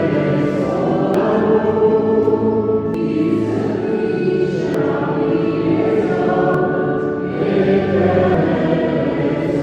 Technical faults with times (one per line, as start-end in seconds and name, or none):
1.14 audio missing between chunks
2.94 audio missing between chunks
4.74 audio missing between chunks
6.54 audio missing between chunks
8.34 audio missing between chunks